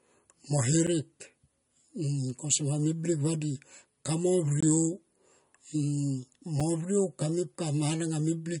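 From the very start the speech has that watery, swirly quality of MP3 compression, likely at a low bitrate around 40 kbps. Nothing comes through above 10.6 kHz, weak detail flickers in and out between frames, and the s sounds go metallic.

There's also a block of digital silence at 0.87 s, again from 4.61 to 4.63 s, and once more at 6.60 s. Each time the sound cuts out with no fade; the first and last are short enough to come across as a tick, and the middle one is a short hole.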